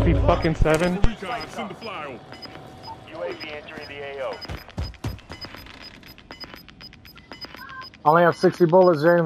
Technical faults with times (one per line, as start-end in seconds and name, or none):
5.31-6.84 CD scratch ticks